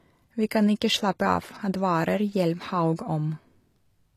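From start to finish the speech carries plainly audible codec damage, likely HE-AAC compression at a low rate, consistent with roughly 24 kbps. The upper band is not the original signal but lower bands copied upward and shaped by a coarse envelope, so s sounds come out gritty and lispy, with a metallic sheen. On a spectrogram the treble shows blocky, repeated-looking patterns above the crossover, harmonics that fail to line up across it, and nothing above 19.8 kHz.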